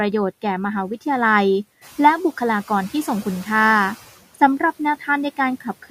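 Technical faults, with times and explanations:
Throughout, noise suppressor artifacts: steady background is pulled down about 14 dB between words and returns under them, pumping more audibly once the room noise rises around 2 s.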